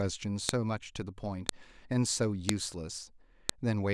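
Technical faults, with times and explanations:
0.49, 1.49, 2.49 and 3.49 s: file header played as audio. A sharp, loud click lands at each of these points, regardless of what the speech is doing at that moment. The audio appears to have been assembled from separate WAV pieces about 1 s long, joined or streamed with each piece's header left in place. Those few dozen header bytes are read as sample values, producing a brief burst of arbitrary data, heard as a snap at every piece boundary.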